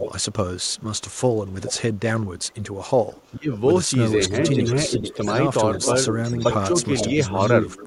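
From the start to 2.57 s a delayed copy of the speech trails the original by about 0.43 s, sitting roughly 10 dB below it. A much fainter trace, around 30 dB down, returns from 3.14 to 3.32 s, and the stronger copy comes back from 4.29 to 5.39 s and from 5.74 s to the end. This is an echo leak, likely from a far end playing the call on a loudspeaker whose echo canceller let part of its microphone pickup through and sent it back.

Between 3.35 and 3.6 s the speech dips sharply, by up to about 20 dB, for roughly a fifth of a second in all, sounding hollowed out or briefly cut. This is speech suppressed in double talk: with both sides talking at once, the echo canceller likely could not tell the local talker from the loudspeaker echo and turned both down together.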